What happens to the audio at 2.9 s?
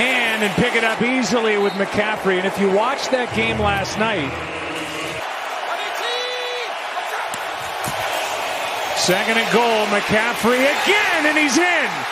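At 2.9 s the audio sounds dull and muffled, its top end rolled away. This is de-emphasis applied wrongly, running from 0.95 to 4.76 s. A treble cut meant to undo pre-emphasis was applied to audio that had none, or was applied twice. It slopes smoothly downward, leaving 10 kHz about 8 dB below 1 kHz.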